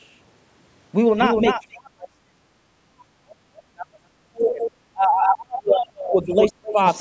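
Doubled audio track runs throughout: a second full-band copy trails about 300 ms behind, roughly 5 dB quieter, dry and uncoloured, most likely captured again by a slower path.

Speech suppressed in double talk from 1.55 to 6.78 s: while both sides talked at once, the echo canceller likely mistook this talker for loudspeaker echo and turned the voice down. It dips by as much as about 40 dB for around five seconds in total, within a band that stops at 8 kHz.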